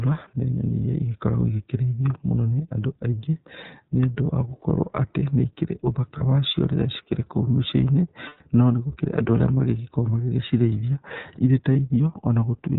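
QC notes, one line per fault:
Throughout: iLBC codec. Narrowband coding leaves nothing above 4 kHz, and each 30 ms frame's excitation is coded on its own, which fits a bitrate near 13 kbps. The speech sounds plainly rough and somewhat synthetic, with the dull, band-limited quality of a telephone line.
6.18 s, 8.28 to 8.41 s, 11.73 s: lost iLBC frames. After "atĩ nĩ ikĩrĩ ũthaka", about 30 ms is lost. Before "no nĩ gũkĩrĩ na", about 120 ms is lost and fades. After "magĩgĩko magĩgĩcirĩithia irĩ ta", about 30 ms is lost. Each gap is filled by repeating the last pitch cycle blended with noise, so it sounds like a held, buzzy vowel, and the speech recovers at once because the frames stand alone.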